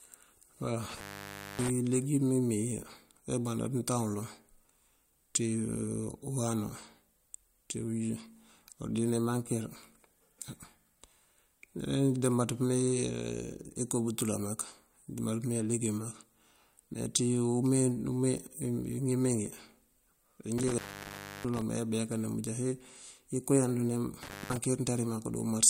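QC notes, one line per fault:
0.90–1.70 s, 20.58–21.62 s, 24.23–24.57 s: intermittent contact. A loose plug or cable connection briefly broke the signal path three times, opening for about 0.58 s, 0.66 s and 0.20 s. Each dropout cuts the speech abruptly, with crackle at the edges as the contact makes and breaks. While the line is open, faint hiss remains.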